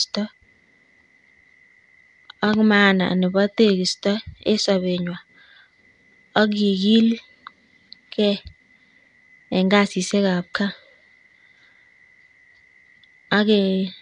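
The clip is speech carrying Nellymoser compression from start to finish, with plainly audible damage: a rough, hissy halo around the voice, a smeared underwater quality, and nothing above 10.6 kHz. The likely cause is the Nellymoser Asao codec that Flash used for microphone input, at a rate that fits about 44 kbps. It codes short blocks with a fixed bit budget, so weak bands receive no bits and are refilled with noise, producing the hiss and smear.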